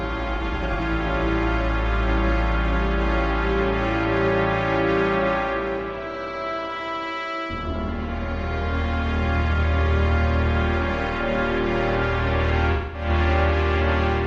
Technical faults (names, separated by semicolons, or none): AAC frame loss with concealment